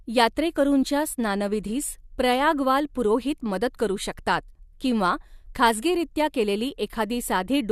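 No technical faults can be heard anywhere in the recording.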